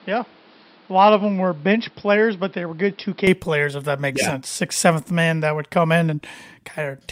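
Input switched to a poorer device, from the start to 3.27 s: for the opening stretch the speech sounds dull and boxy, with nothing above 5.5 kHz, a level a few decibels lower and a faint added noise floor well below the voice. At 3.27 s, just before "players if that makes", the sound clears abruptly with no gap, as though recording moved from a narrower-band microphone or headset profile to the fuller one, which is the likely cause.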